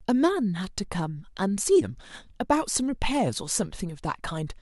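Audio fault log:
No technical faults can be heard anywhere in this speech recording, and the signal stays steady and intact throughout.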